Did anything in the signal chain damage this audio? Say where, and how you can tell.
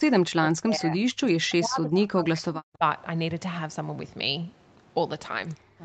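Yes, in call processing: from 0.0 to 2.83 s the waveform collapses and the spectrogram fades by roughly 40 dB, likely speech suppressed in double talk by an echo canceller ducking this side's talker along with the loudspeaker echo.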